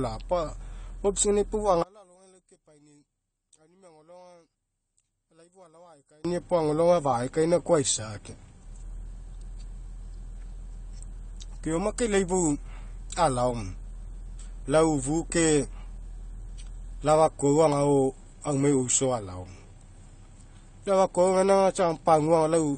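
Speech runs through likely AAC compression at a low bitrate, consistent with about 32 kbps, which removes everything above 9 kHz and leaves the voice dull, smeared and plainly degraded throughout. From 1.83 to 6.25 s, one channel inverted in polarity likely cancels the shared centre signal on mono summing, dropping the level by about 31 dB to a faint remnant.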